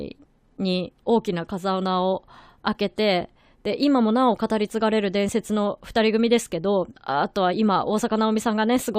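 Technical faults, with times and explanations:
Listening closely to the recording, nothing technical stood out at any point.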